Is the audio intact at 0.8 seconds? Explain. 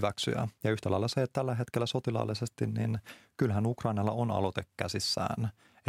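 Yes, the speech at 0.8 seconds plays through intact, with no dropout, click, distortion or other fault at that moment.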